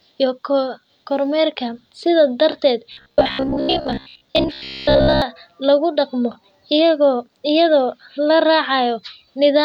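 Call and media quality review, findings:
Robotic sound from repeated short buffers, 2.92 to 5.22 s, ending right before "lagu dhaqmo". Speech goes stiff and metallic, with a steady buzz near 67 Hz locked over it. That fits a looped chunk of about 15 ms. Likely a playout or jitter-buffer underrun: audio arriving too slowly, so the last slice gets replayed for most of that stretch and the real audio is skipped.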